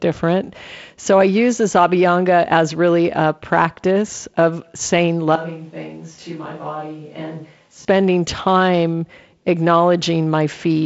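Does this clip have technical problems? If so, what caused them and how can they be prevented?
Yes. From 5.35 to 7.85 s, just after "a practice of saying", the sound abruptly turns roomy, thin and about 10 dB quieter with faint background noise, likely a switch to a distant microphone. A simple level dip would not add room. Monitor and secure the close microphone during recording.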